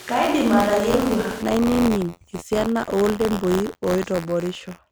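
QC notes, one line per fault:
throughout: buffer tearing. A rattling buzz near 86.1 Hz, which fits a 512-sample buffer, rides on the speech; a small slice of each period, a few percent, replays audio about 40 ms stale. Waveform shows regular hard steps, and the spectrogram shows evenly spaced vertical striations.
0.0–1.42 s: switch to a distant microphone, already under way as the clip begins. The speech sounds roomy and hollow with thinned bass, level roughly unchanged, room noise around 20 dB below the speech, likely from a far-placed pickup. The spectrogram shows weak lows, a raised noise floor and smeared decays, changing abruptly at 1.42 s.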